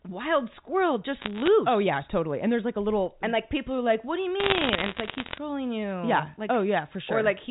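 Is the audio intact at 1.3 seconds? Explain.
No. Bit errors on a digital phone line hit from 1.2 to 1.48 s, just after "wild squirrel". Flipped bits, around half a percent, each corrupt one sample of the G.711 signal. Sign or high-bit hits make sharp ticks, heard as crackle over the band-limited speech.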